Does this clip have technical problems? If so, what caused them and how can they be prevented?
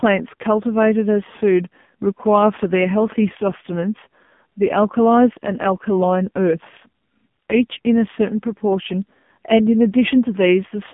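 Yes. From start to finish the speech sounds thin, boxy and buzzy, with a synthetic, robotic edge and nothing above 3.5 kHz or below about 150 Hz. This is AMR narrowband mobile codec damage. AMR-NB models the vocal tract and excites it with only a few pulses every few milliseconds, so the heavy artefacts here point to a very low bitrate, around 5.9 kbps. To prevent it, record or transmit with a wideband codec at a higher bitrate, or capture the audio locally rather than over a mobile call.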